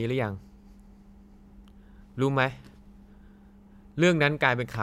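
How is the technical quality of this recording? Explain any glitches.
The speech recording has no technical glitches: nothing in the signal breaks, distorts or drops out at any point.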